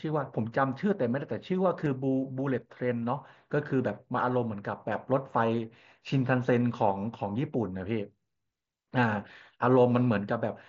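At 1.85 s the speech has a brief concealed Bluetooth headset packet loss. About 15 ms of audio, roughly two short headset frames, never arrived from the headset, and the receiver filled the gap by repeating the best-matching stretch of the preceding waveform. It sounds like a tiny buzzy smear rather than a dropout. The waveform shows a short, near-periodic copied segment at full level instead of silence, and the spectrogram shows a thin column of smeared harmonics within the 8 kHz band of the mSBC link.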